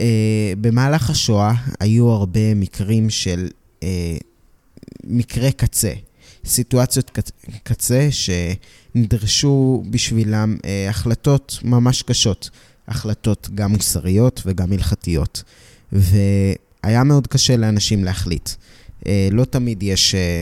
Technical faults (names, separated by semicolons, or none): none